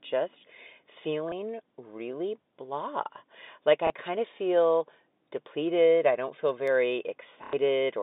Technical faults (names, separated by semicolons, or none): packet loss with last packet repeated